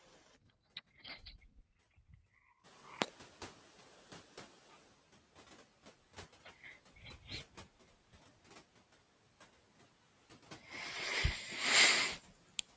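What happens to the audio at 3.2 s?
At 3.2 s the noise suppressor is catching up (2.63–4.89 s): the room noise jumps about 17 dB, slips through, then sinks about 9 dB gradually, without tracking the speech the way pumping would.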